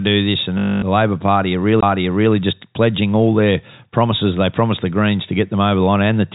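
Speech recorded at telephone bandwidth, with nothing above 4 kHz as expected from G.711 telephone coding, carries two faults. Right after "do this and", from 0.58 to 0.82 s, the sound turns into a short robotic stutter: a buzzy repetition about 240 ms long. This is packet loss with the last packet repeated. When packets stopped arriving, the receiver kept replaying the last one it had until new audio came in. The buzz sits near 50 Hz, which fits 20 ms packets looping. At 1.81 s there is a very short gap, roughly 20 ms, and then the audio resumes at a different point, just before "just pledging all their". This is a CD skip. A knock or a flaw on the disc made the laser jump to another turn of the spiral, so the player muted for a moment and picked up from a new place.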